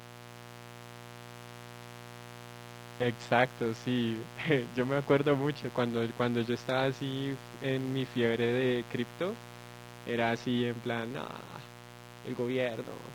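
Mains buzz runs under the speech the whole way through: spiky 60 Hz interference with harmonics up into the kilohertz range, a raspy drone sitting only about 15 dB down.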